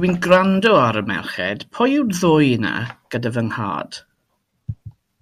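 Speech, with hard clipping from 0.32 to 0.78 s. The signal runs about 3 dB past what a stage in the chain can pass. Its peaks are sliced flat. That adds high harmonics, heard as crackle on the loudest moments of that stretch.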